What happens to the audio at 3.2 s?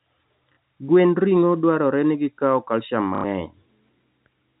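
Packet loss with the last packet repeated hits from 3.15 to 3.24 s: about 90 ms went missing, which fits three 30 ms packets, and the receiver looped the last one, giving a roughly 33 Hz robotic stutter rather than the silent hole of a plain dropout.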